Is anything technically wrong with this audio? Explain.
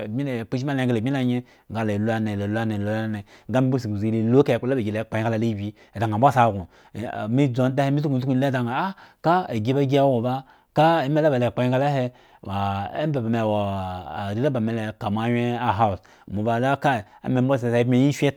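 No, nothing here stands out as a technical problem; the speech comes across steady and intact the whole way.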